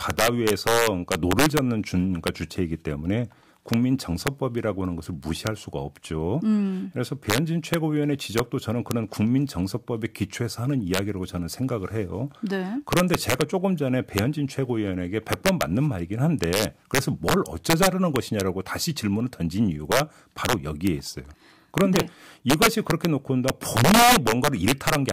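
Throughout the speech, integer overflow driven about 5 dB too hot wraps a small fraction of peaks to the opposite sign, giving violent cracks, seen as sudden vertical flips to the opposite sign on the waveform.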